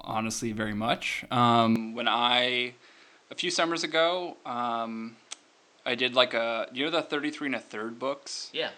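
At 1.76 s the speech abruptly turns duller and a little quieter, and stays that way to the end. Nothing above 8.8 kHz survives, a new noise floor sits roughly 35 dB below the voice, and the level falls by about 5 dB, with no gap at the change. This points to the input likely being switched to a poorer device. A spectrogram shows the top band vanishing at that instant, and the waveform's envelope steps down.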